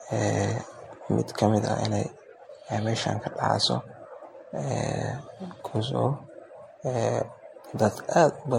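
From start to end, the speech has a swirly, smeared quality. It also sounds hollow, and consonant attacks blur. Nothing is present above 16.5 kHz. This is generation loss, likely from repeated MP3 encoding, around seven passes, at a rate that points to 64 kbit/s. Each decode and re-encode quantises the signal again on a shifted frame grid. The noise and spectral holes pile up, so the damage is worse than one pass at that bitrate would cause.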